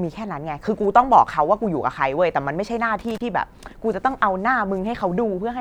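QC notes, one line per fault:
2.99–3.21 s, loose connector crackle: a short, irregular burst of scratchy crackle lasting about 0.22 s cuts across the speech, with the sound stuttering and breaking up rather than simply dropping out. This is the signature of a worn or dirty contact in the signal chain making and breaking connection as it shifts. Each momentary break chops the audio, and any DC present on the line turns those rapid interruptions into pops layered over the crackle.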